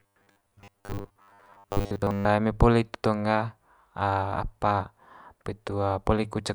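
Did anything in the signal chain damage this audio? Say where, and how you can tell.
Yes. From 0.01 to 2.25 s the speech becomes robotic sound from repeated short buffers: a rigid, metallic buzz fixed at 100 Hz that roughly tracks the speech, clearing just before "eme poli itu tong". The likely cause is a buffer underrun at the driver or buffer stage, where the audio path replays a stale chunk of about 10 ms instead of new data, skipping most of the real signal and imposing its own fixed pitch.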